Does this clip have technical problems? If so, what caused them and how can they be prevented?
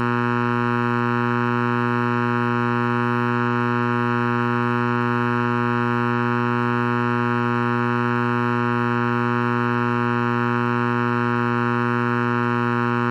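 Yes. Channel delay (comb filtering) runs throughout: one channel lags by under a millisecond, so mono summing cancels evenly spaced frequencies from around 700 Hz, sounding hollow. Prevent it by time-aligning channels before summing.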